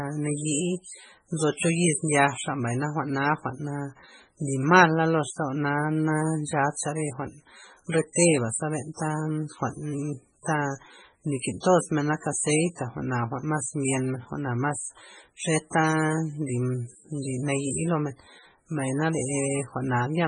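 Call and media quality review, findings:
Heavy watery swirl on speech throughout; likely MP3 compression, bitrate fitting 16 kbps, weak bands zeroed frame to frame. Spectrogram: flickering holes, hard ceiling at 10.5 kHz.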